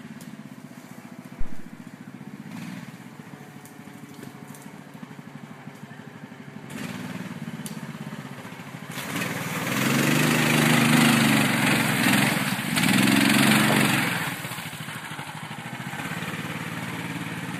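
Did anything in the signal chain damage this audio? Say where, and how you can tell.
Yes. At 1.41 s a deep, low thump cuts into the sound, peaking at about -13 dBFS and dying away within roughly 72 ms, with its tail gone by 1.73 s. This is a phantom power thump in the analogue input stage. Switching the supply on a live input puts a sudden DC step across the coupling capacitors. It passes through as a single low-frequency pulse that then drains off, which gives the short, rounded decay heard here.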